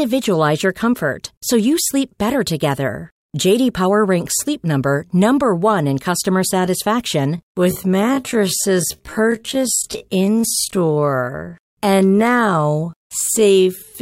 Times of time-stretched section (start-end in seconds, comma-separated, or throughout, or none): 7.35-14.01